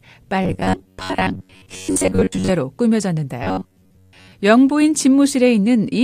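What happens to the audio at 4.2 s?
At 4.2 s the speech is inside a stretch of robotic sound from repeated short buffers, running from 3.44 to 4.32 s. New audio likely arrives too seldom, so the playback keeps looping a fragment of about 10.7 ms while real audio is skipped. Most of the sound in this stretch is such repeats. The looping imposes a fixed buzz at 93.8 Hz. The voice becomes a stiff, metallic drone that only loosely tracks the words.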